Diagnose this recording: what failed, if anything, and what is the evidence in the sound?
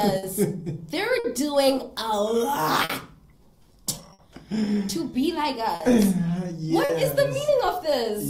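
An unsteady, faintly dragging tempo runs through the whole clip, with small hiccups at uneven spacing. This is clock drift between sender and receiver, at the network and jitter-buffer stage. The sending clock runs slow by roughly five percent compared with the receiver's. The receiver's buffer therefore keeps draining, and it must keep padding the audio to avoid running dry. That shortfall drives both of the faults described below.

From 0.06 to 5.62 s the sound plays slightly slow, at 99% speed, and the hesitations are irregular rather than rhythmic. These are repeated timing corrections. The receiver repeatedly stretches or repeats short pieces, always adding time, never cutting. Over that stretch it inserts something like 70 ms in total to keep the buffer fed. Because each insertion is small, it is heard as a wavering pace rather than distinct glitches.

Six brief moments sound held or smeared, each with a slight buzz or dip in level: at 0.18, 1.19, 2.85, 4.13, 5.75 and 6.84 s. 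Each is a short stall from a late packet. The jitter buffer ran empty, and the receiver sustained the last sound for 50 ms (60 ms at 4.13 s) until the packet arrived. Playback then resumed from the same point, with nothing lost, but each stall adds a matching 50 to 60 ms to the playout delay.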